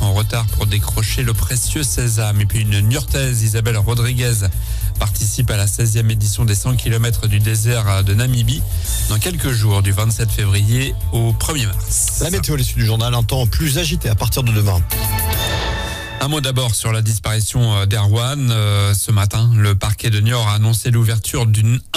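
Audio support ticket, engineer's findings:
No audible faults found.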